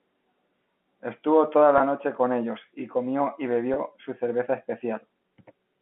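Packet loss with pitch repetition occurs from 1.78 to 1.80 s and again from 3.74 to 3.76 s. Each time about 20 ms of audio goes missing, which fits two lost packets, and the receiver fills the gap by repeating the last pitch period. Over the telephone-band G.711 line, each gap sounds like a brief, slightly held, buzzy note.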